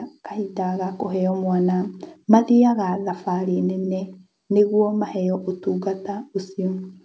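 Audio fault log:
0.3–1.41 s, automatic gain rising: the speech and the background beneath it swell upward together over roughly a second, ending about 5 dB louder than where they started, with no abrupt step anywhere in the climb. That shared, gradual lift is the mark of an automatic gain control that judged the input too quiet and eased its gain up. The call path's band limit at 8 kHz, which fits a wideband call codec, stays unchanged while the level rises.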